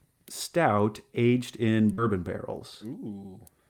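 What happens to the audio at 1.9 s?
Just after "stout aged in", about 40 ms of the call's audio reached the decoder too late, a short concealed packet loss spanning 1.93 to 2.01 s. The receiver stretched the preceding sound across the hole and blended back, leaving a brief smear or wobble.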